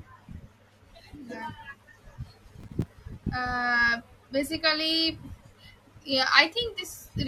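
From 2.60 to 2.87 s the processor falls behind its audio deadlines, a case of processor overload crackle. Roughly ten short buffers, each only a few milliseconds long, are not ready in time and are replaced by silence. Each dropout starts and stops abruptly, so the speech is chopped by a rapid string of tiny hard-edged holes. Heard together they form a gritty, tearing crackle over the speech that clears once the load eases.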